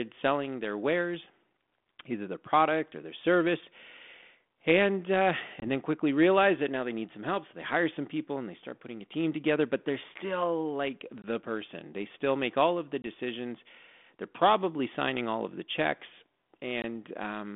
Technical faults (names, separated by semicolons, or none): packet loss on an ADPCM call